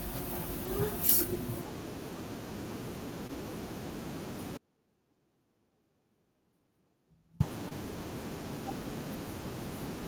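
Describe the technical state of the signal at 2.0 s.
The signal is intact at 2.0 s, with the speech passing cleanly and no audible fault at that moment.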